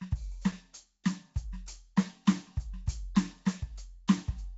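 The music clip has likely been passed through Nellymoser compression, the Flash-era Nellymoser Asao codec, and the coding damage is plainly audible throughout. That codec splits the signal into short blocks and spends a fixed, small budget of bits on each, which fits a rate of about 32 kbps. Bands that miss out are replaced with generated noise, so the music carries a noisy, smeared coloring, and nothing is left above 7.7 kHz. At 0.52 s, the output was briefly fed a block of digital silence, most often the result of a buffer not being filled in time, though an invalid calculation can also produce one. The signal cuts out and back without any fade for about 5 ms, too short to register as a silence, so it is heard as a tick or momentary dip in the music.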